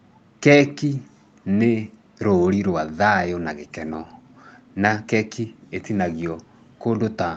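Nothing goes wrong anywhere in this speech, and the top end simply stops around 8 kHz, just what you'd expect from ordinary call microphone processing and a WebRTC call path doing their usual jobs.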